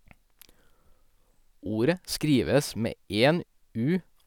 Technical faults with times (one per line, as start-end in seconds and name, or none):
none